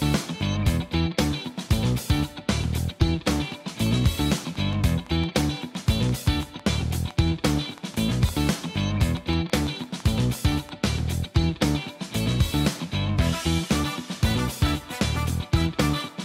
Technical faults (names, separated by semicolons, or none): train of clicks